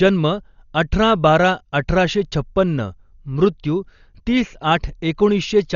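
A speech recording with heavy codec damage throughout. Nothing is heard above 6.9 kHz, so it sounds dull. Rough, fluttering noise surrounds tonal parts, where starved frequency lines are filled with noise. The cause is likely Dolby Digital compression, at a rate that fits about 40 kbps.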